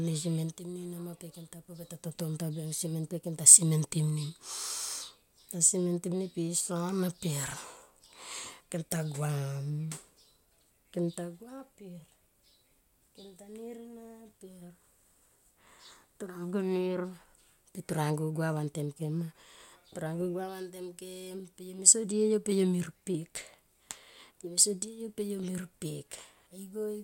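No technical faults can be heard anywhere in the recording.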